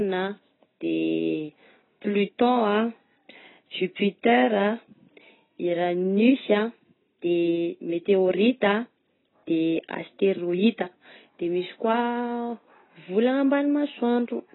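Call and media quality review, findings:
Heavy AAC compression, throughout: likely low-bitrate AAC-LC encoding, consistent with roughly 16 kbps. Encoder discards all content above 4 kHz and coarsely quantises what remains. Speech is dull and muffled, with smeared, warbling sibilants and a watery texture on sustained sounds.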